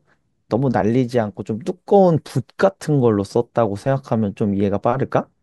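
No technical faults are audible anywhere in the speech.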